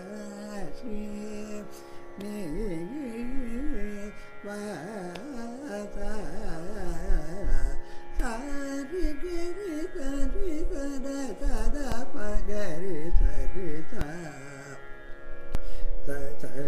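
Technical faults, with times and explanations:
11.92–14.01 s and 15.55 s to the end, DC step: a low thump at each onset, and again at 14.01 s, as the waveform's zero line jumps by about -16 dBFS.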